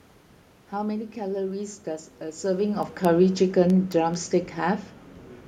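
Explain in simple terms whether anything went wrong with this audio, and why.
Two things went wrong. From 0.20 s to 5.45 s there are word clock ticks: sharp clicks of uneven strength about every 0.2 s, roughly thirty in all. They come from two digital devices running on slightly different clocks. Their steady rhythm sets them apart from random crackle.

From 2.46 s to 4.88 s, automatic gain falling makes the speech gradually quieter. Unlike the talker shifting position around 2.5 s, the room's background noise sinks along with the voice.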